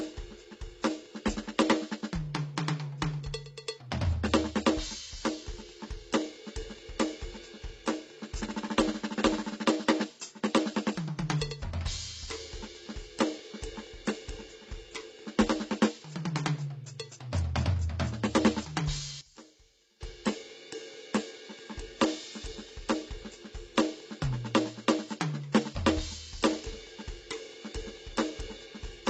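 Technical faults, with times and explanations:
Throughout, transcoding between lossy codecs: nothing above 8.3 kHz, and two layers of smeared, swirly artefacts. Likely an MP3 then re-encoded as HE-AAC.
19.21 to 20.01 s, one channel inverted: the music drops by about 19 dB to a faint copy. Likely reversed polarity cancelling centred content on mono summing.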